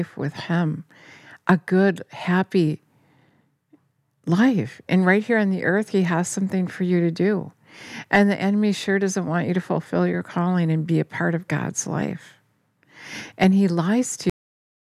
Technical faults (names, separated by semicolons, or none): cut-off end